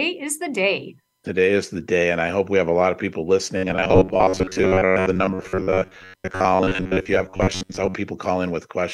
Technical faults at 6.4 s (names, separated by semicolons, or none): robotic sound from repeated short buffers